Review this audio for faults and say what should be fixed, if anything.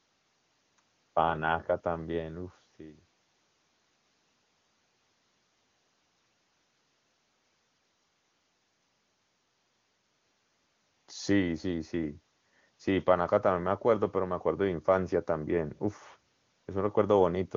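No faults found, so nothing needs fixing.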